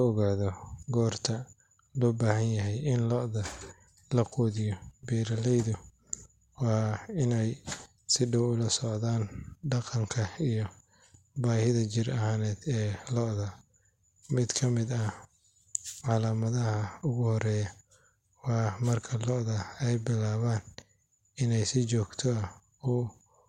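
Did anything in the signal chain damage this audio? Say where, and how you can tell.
No, no signal-chain damage heard.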